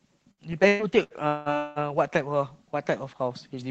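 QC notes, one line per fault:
0.31–1.79 s: repeated packet loss (robotic sound). Five gaps, longest 182 ms, are patched by extending prior sound; around 41% is concealed, giving choppy speech with pieces missing.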